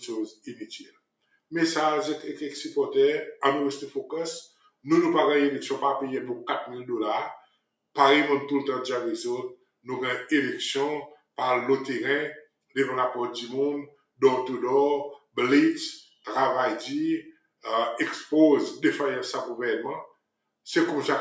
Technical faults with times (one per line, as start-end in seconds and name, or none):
0.00-21.20 noise suppressor applied to music or sounds
0.31-1.51 sound cut by the noise suppressor
4.48-4.85 sound cut by the noise suppressor
7.39-7.96 sound cut by the noise suppressor
9.56-17.64 sound cut by the noise suppressor
20.07-20.66 sound cut by the noise suppressor